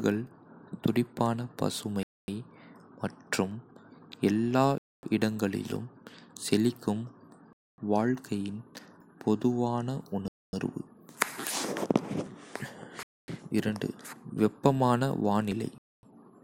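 From 0.27 s to the end, periodic USB or driver dropouts blank a sliver of speech every 1.0 s, heard as regular ticks; the waveform shows evenly spaced hairline notches.

A gap between chunks interrupts the speech for 250 ms at 2.03, 4.78, 7.53, 10.28, 13.03 and 15.78 s, after each 2.5 s chunk. Each one is a hard-edged hole, shown as a flat waveform and a blank vertical band on a spectrogram.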